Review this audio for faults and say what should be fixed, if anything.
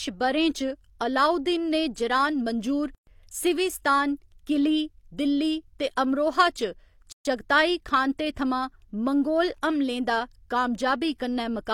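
Twice the speech drops into silence and then resumes exactly where it stopped: from 2.95 to 3.07 s (a 123 ms hole) and from 7.12 to 7.25 s (130 ms). Both edges are smeared by the codec. These are gaps at a join of encoded pieces. Each segment was encoded on its own, so the encoder's start-up delay and the padding on its final frame both remained as silence at the seams. Prevent this by encoding the audio as one continuous stream, or by trimming each segment's encoder delay and padding before joining.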